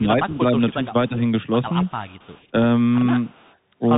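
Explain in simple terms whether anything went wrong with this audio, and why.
Yes, several things went wrong. Throughout, the speech has the narrow, scratchy sound of the Bluetooth CVSD headset codec. Nothing above about 3.8 kHz gets through, so it sounds muffled like a phone call, with a grainy hiss underneath and rough, scratchy s sounds.

Early on, the voice keeps sinking. From 0 to 0.23 s the level drops noticeably, with two milder dips from 0.39 to 0.93 s and from 1.09 to 1.21 s. It dips rather than cutting to silence, which points to speech suppressed in double talk. The likely cause is the other person talking at the same time.

Later there is an echo leak, likely from a loudspeaker on the far end. A very faint copy of the voice trails about 0.27 s behind, from 1.83 to 2.47 s and from 3.26 to 3.56 s. The copy arrives as a separate delayed repeat, not as a room-like smear, which is how it differs from ordinary reverberation.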